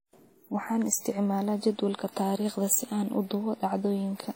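Transcoding between lossy codecs runs through the whole speech clip. Nothing reaches above 16.2 kHz, and the artefacts of two different coders are heard together. The likely cause is a lossy encode, which fits WMA at around 64 kbit/s, re-encoded by a second codec that sounds like HE-AAC at about 32 kbit/s. That second encoder wastes bits reproducing the first one's damage while adding its own.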